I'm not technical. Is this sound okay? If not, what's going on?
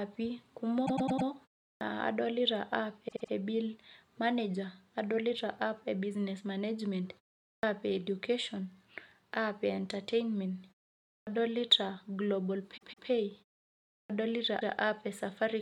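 No. There are two problems. Repeated frames: at 0.85 to 1.27 s, 3.07 to 3.31 s, 12.76 to 13.08 s and 14.59 to 14.72 s, a snippet of about 0.08 to 0.16 s plays again, once to four times, like a stutter. Clipped start after a pause: at 1.74, 7.55, 11.19 and 14.03 s, speech after a brief silence loses its first 70 to 80 ms, so it begins abruptly.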